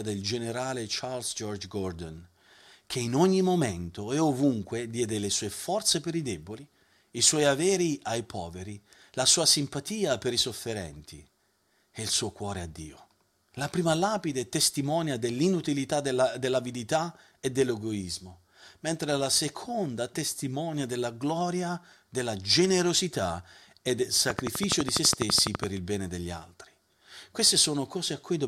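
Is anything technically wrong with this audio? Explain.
Yes. From 24.30 to 25.65 s a train of clicks ticks over the speech, around fifteen sharp pulses at a steady 12 per second, peaking roughly 20 dB above the speech. The near-identical, evenly spaced shape likely comes from electrical interference or a faulty connection or power supply injecting repeated pulses.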